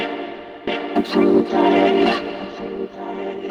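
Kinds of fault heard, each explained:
Skip ahead: at about 0.67 s the sound jumps abruptly forward, with no silence or fill at the join, so what comes before runs straight into material from later on and roughly 0.7 s of audio is simply missing. This happens when a stretch of audio is dropped while later audio is already queued, either lost in transit or discarded by an overflowing jitter buffer. Playback then resumes from the newer audio, cutting the delay by about the same amount.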